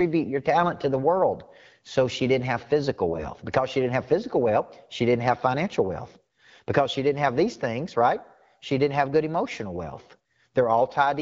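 Just after "she didn't have physical", from 3.08 to 3.27 s, and again from 5.25 to 5.38 s before "financial wealth", the audio turns hoarse and gargly but keeps its pitch and level. These are AMR bit errors. Flipped, weakly protected bits scattered the excitation pulses and skewed gain and spectral values, and the first burst was heavier.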